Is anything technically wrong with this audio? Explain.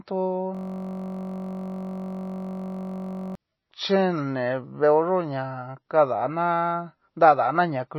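Yes. Throughout the speech, the audio is dull and watery, with nothing above 5.8 kHz. This is likely MP3 compression at a low bitrate, around 24 kbps, which discards the treble and weak detail.

From 0.55 to 3.35 s, a system hang loop repeats one 21.33 ms slice, which fits a 1024-sample buffer. It produces a steady buzz at 46.9 Hz.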